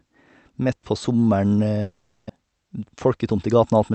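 A long network dropout runs from 1.81 to 2.31 s, likely caused by packets failing to arrive. The receiver fills almost the whole half-second with a fading, buzzy continuation of the last sound, never dropping to silence, and about 400 ms of the original speech is lost.

A jitter buffer speed-up follows from 3.07 to 3.93 s. With roughly 70 ms of excess audio queued after the gap, the receiver trims short pitch-period slices repeatedly, so this stretch plays about 6% faster at unchanged pitch and sounds slightly hurried through the Opus call path's 8 kHz bandwidth.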